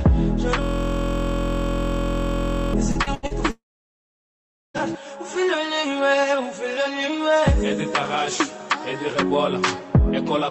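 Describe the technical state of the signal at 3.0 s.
At 3.0 s the signal is inside a stretch of repeated packet loss (robotic sound), from 2.91 to 3.33 s. Four gaps, the longest 81 ms, are filled by stretching the preceding sound. About 45% of the span is concealment. It sounds choppy, with pieces missing.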